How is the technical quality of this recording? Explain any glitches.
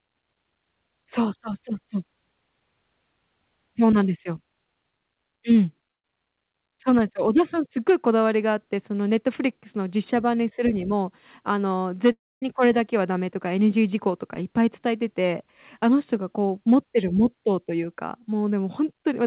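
The recording has two network glitches in the speech, both heard through a call path whose G.711 mu-law coding leaves nothing above 4 kHz.

At 5.91 to 6.05 s there is a burst of packet loss. A few consecutive packets never arrived in time, so the receiver extended the last sound for about 125 ms, turning it down as it went, and about 130 ms of speech is skipped. It sounds like a brief held sound that fades before the speech jumps ahead. On a spectrogram the last sound's spectrum is frozen and fades out. The waveform continues the last sound with a shrinking envelope.

At 12.12 to 12.43 s there is a longer gap, likely a long network dropout. About 300 ms of audio is lost. The receiver fills it with a held continuation of the last sound that decays to near-silence, and the speech then resumes past the missing stretch. A spectrogram shows a smeared, static band fading into an almost empty column. 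The waveform shows a decaying repetitive stretch collapsing to a near-flat line.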